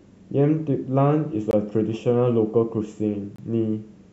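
The speech is briefly interrupted by what is likely a Bluetooth stall: retransmitted packets arriving late let the receiver's buffer run dry. Playback drops to silence for about 19 ms at 1.51 to 1.53 s and about 25 ms at 3.36 to 3.39 s, then resumes.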